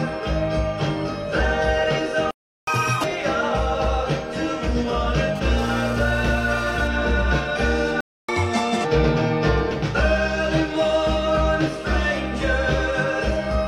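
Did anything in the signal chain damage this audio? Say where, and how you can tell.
Yes. The sound cuts to silence from 2.31 to 2.67 s and again from 8.01 to 8.29 s. These are playback stalls, likely the player starving for buffered data or its thread being blocked.

After each gap the audio rushes ahead, sped up and raised in pitch. From 2.67 to 3.04 s it runs at 2x, about ten semitones higher, and from 8.29 to 8.85 s at 1.5x, about seven semitones higher. This is catch-up at higher speed: the player resamples its backlog to recover the lost time.

From 5.36 to 6.88 s a harsh, raspy 217 Hz buzz sits about 19 dB below the signal, intermittent rather than steady. This is GSM phone buzz: the analogue wiring rectifies a nearby 2G phone's data-transfer bursts.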